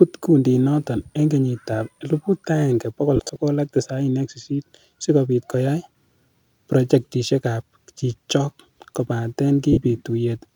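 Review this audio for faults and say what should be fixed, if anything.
Two brief patches of the speech turn into a hissy, smeared buzz: from 3.16 to 3.36 s, about 98 ms of gaps scattered across 195 ms with runs up to around 40 ms, and from 9.73 to 9.77 s, 45 ms right after "projectisiekab chichok kobaten". These are lost LE Audio frames: the LC3 decoder concealed each gap by replaying the previous spectrum with random signs. Preventing this means strengthening the Bluetooth link with less interference, a shorter distance or more retransmission headroom.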